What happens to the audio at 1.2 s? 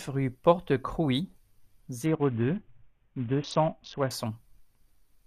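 Nothing goes wrong at 1.2 s; the speech carries on intact through that moment with no dropout, click or distortion.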